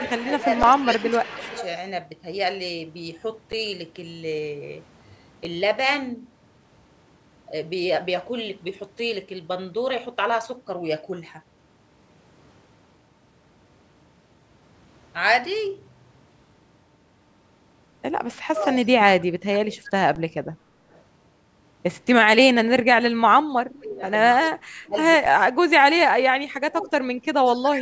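From the start to 1.68 s an echo leak is audible: a faint copy of the speech trails the original by 258 ms, about 15 dB down, most likely because the far end's loudspeaker output reached its microphone and its echo canceller passed part of it back. The same 258 ms echo recurs at 18.6 to 18.87 s (roughly 35 dB down), 20.93 to 21.01 s (about 40 dB down), 24.1 to 24.5 s (about 20 dB down) and 27.56 to 27.71 s (about 25 dB down), short enough to sound like brief ghosted fragments.

Overlapping the first echo, from 0.41 to 1.47 s, the speech dips by around 10 dB in short pieces totalling about a third of a second. This is speech suppressed in double talk, likely the canceller misreading simultaneous talk as echo and attenuating everything. It returns harder from 18.45 to 19.76 s, with drops near 30 dB over about half a second, and most severely from 23.56 s to the end, where the level falls by up to about 35 dB over around three seconds in total.

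Underruns with held sample occur at 0.63 s (8.5 ms), 3.52 s (10 ms), 5.45 s (5 ms) and 20.15 s (10 ms). Each time the output buffer ran dry, the converter froze on its last value and a comparable stretch of audio was lost, producing a tiny flat gap.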